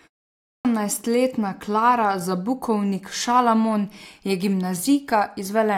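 At 0.35 s, after a 0.35 s pause, a clipped start after a pause swallows about 0.3 s while the output device wakes. The speech begins abruptly, missing its opening sounds.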